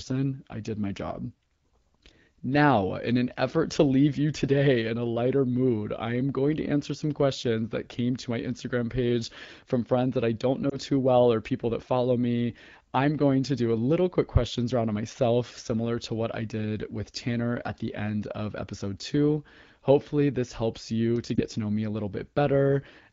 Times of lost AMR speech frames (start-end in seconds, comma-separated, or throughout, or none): 10.70-10.77, 21.36-21.42